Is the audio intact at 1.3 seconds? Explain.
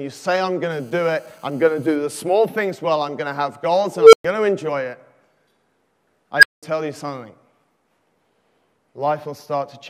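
No. From 0.72 to 1.96 s, GSM phone buzz sits about 32 dB below the sound: a nearby handset on a call pulses its transmitter 217 times a second, and the audio circuit rectifies those bursts. The result is a steady, raspy 217 Hz buzz, harsher than mains hum and not a multiple of 50 or 60 Hz.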